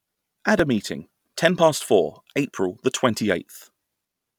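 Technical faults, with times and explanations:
0.59 s and 2.58 s, audio missing between chunks: two tiny skips, each dropping just a few milliseconds, right before "a meeting ten" and "the twenty". The speech jumps straight across with no gap, likely from a recorder working in 1-second chunks and losing a sliver at each handover.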